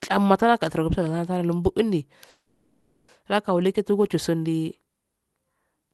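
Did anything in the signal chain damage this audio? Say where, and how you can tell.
Yes. A call audio freeze runs from 2.29 to 3.11 s, likely a network stall that emptied the jitter buffer. The receiver stretched the last sound into a fading buzz or hiss for about 790 ms, then resumed where it stopped, leaving the rest of the speech intact but later.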